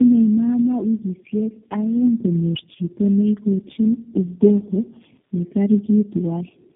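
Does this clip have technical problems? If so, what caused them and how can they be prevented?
Yes. Tandem speech coding runs through the whole clip: the speech is rough, muffled and warbly, with nothing above 3.7 kHz, which fits three low-rate speech coders in a row, such as AMR-NB and G.729A, each re-encoding the previous coder's already degraded output. To prevent it, use transcoder-free operation or a single common codec end to end so the speech is encoded only once.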